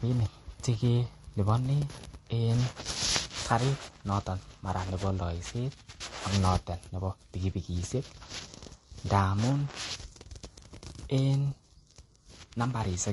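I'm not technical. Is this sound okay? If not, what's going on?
No. Throughout, the speech sounds dull, with the artefacts of two codecs heard together and nothing above 11.3 kHz. Likely transcoding between lossy codecs: squeezed as MP3, then again as Vorbis.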